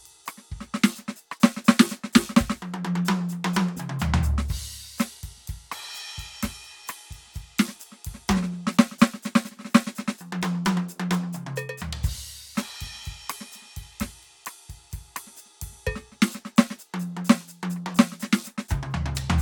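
No technical faults can be heard anywhere in this music.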